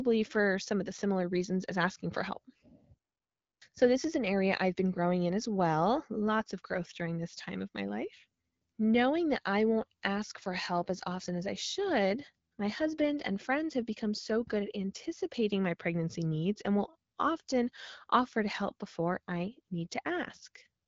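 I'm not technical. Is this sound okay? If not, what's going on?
Yes, nothing in this speech recording is faulty. It has gone through the AMR wideband (HD Voice) codec used for high-quality phone calls, so it sounds like a good mobile call with the very top of the treble cut off and a faint touch of that coding.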